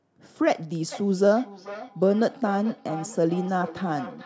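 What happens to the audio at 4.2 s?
At 4.2 s the speech is still caught in a feedback echo between two devices, running from 0.92 s to the clip's end. A second device replays this microphone's signal into the room, and it is picked up again, so each word returns roughly every 0.4 s, thinner and ringing, peaking about 14 dB below the speech.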